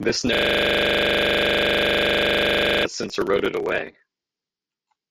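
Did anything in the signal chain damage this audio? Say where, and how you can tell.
Yes, at the driver or buffer stage. From 0.35 to 2.85 s, just before "since eroded away", a system hang loop replays one 40 ms slice exactly, making a steady 25 Hz buzz. Identical repeats, not silence or jitter, mean the ring buffer kept cycling while the system froze.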